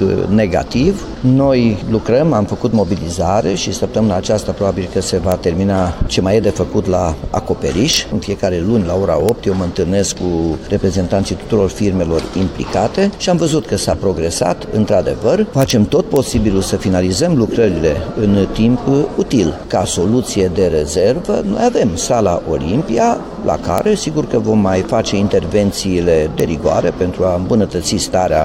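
Seven sharp cracks of integer overflow break into the audio at 5.32, 7.94 to 7.97, 9.29, 15.62 to 15.70, 16.16, 23.78 and 26.40 s. At each loud peak, a sample sum or gain stage exceeds the largest representable integer and wraps around to the opposite sign instead of being held at full scale. The waveform jumps across its entire range, producing cracks far harsher than clipping. The peaks barely reach the limit.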